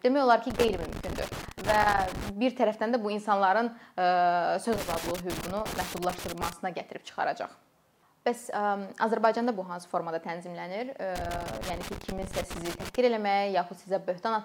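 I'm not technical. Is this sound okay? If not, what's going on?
No. A cable plug or socket has a worn or dirty contact, so the connection keeps breaking and reconnecting. This loose connector crackle chops the sound into irregular scratchy bursts, heard from 0.50 to 2.29, 4.73 to 6.53, and 11.16 to 12.95 seconds.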